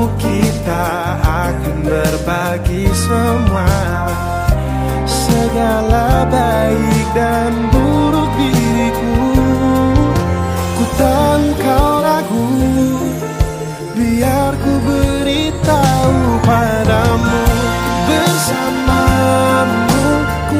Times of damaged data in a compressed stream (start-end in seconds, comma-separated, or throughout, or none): none